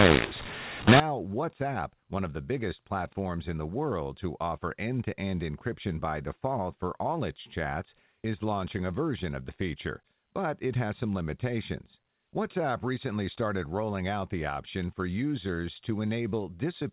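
Speech over G.711 A-law telephone coding, with a mu-law and A-law mix-up from 0.0 to 1.0 s: A-law bytes are decoded as mu-law, so sample levels are remapped wrongly, giving harsh, distorted speech and noise-filled gaps where quiet samples rise well above silence.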